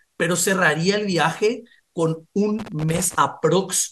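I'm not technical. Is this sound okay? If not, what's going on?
No. From 2.59 to 3.15 s there's loose connector crackle: a worn or dirty plug contact keeps breaking the signal, causing an irregular scratchy burst.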